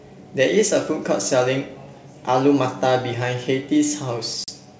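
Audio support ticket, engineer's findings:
Hard-edged silent gap near the end, 4.44 to 4.50 s. About 40 ms of audio missing, then speech resumes slightly distorted before settling. Packet loss on an ADPCM call: a couple of packets dropped, and the decoder's adaptive predictor and step size lost sync with the sender's until they re-converged. Wideband G.722 path at 64 kbit/s, speech clear to 7 kHz with faint upper-band hiss.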